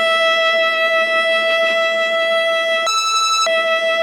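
From 2.87 to 3.47 s, the audio was read two samples at a time (double speed): the music plays at 2x, an octave up.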